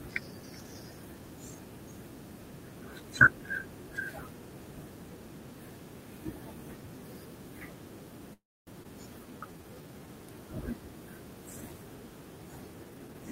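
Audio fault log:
8.33 to 8.69 s, call audio freeze: the speech stops for about 0.36 s. The last sound is carried on briefly as a fading fill, then about 270 ms of silence follows before the speech resumes at the point where it broke off, with nothing lost. This is likely packets held up in transit so the jitter buffer ran dry. The receiver padded the wait, and the whole stream now plays about 335 ms later than before.
8.83 s, skip ahead: right after the freeze, playback jumps forward over roughly 200 ms of speech, with only a 15 ms join between the two sides. Later audio was already queued, so the receiver discarded a stretch rather than play it late. That recovers roughly 150 ms of the delay built up by the freeze, and the cut leaves the speech abruptly spliced, with part of it simply gone.
9.19 to 10.07 s, jitter buffer slow-down: for nearly 0.9 s the speech runs at about 82% speed while keeping its pitch, so sounds are drawn out and the rhythm drags, with a faint warble in places. 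The buffer was short of reserve after the disruption, so the receiver repeated single pitch periods and slivers of pauses many times over, adding 164 ms in total to rebuild its cushion.
12.84 to 13.31 s, jitter buffer speed-up: the final half second plays at about 144% speed at unchanged pitch, making the speech sound hurried and clipped. The buffer was holding more audio than its target, so the receiver trimmed out short pieces of one or a few pitch periods in quick succession, removing roughly 200 ms to pull the delay back down.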